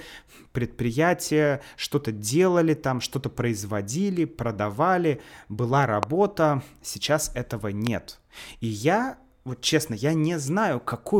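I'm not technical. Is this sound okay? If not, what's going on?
No. There are two loud pops in this speech. The first comes at 6.03 to 6.05 s, right after "производили продавали была". The second comes at 7.87 to 7.89 s, right after "сейчас этого". Each is a single sharp click, much louder than the talking, and the speech carries on underneath it. The likely cause is a sudden electrical jolt, such as a plug, a switch or static, that got into the recording.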